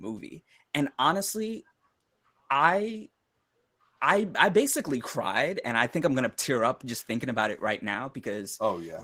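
From start to finish the speech carries Opus voice compression, and the damage is plainly audible. The sound points to a low bitrate, something like 16 kbps, with the hybrid mode in play: the linear-prediction coder handles the band up to 8 kHz while a thin transform layer covers the top. The excitation is coded coarsely, so the voice comes out hoarse and a little robotic.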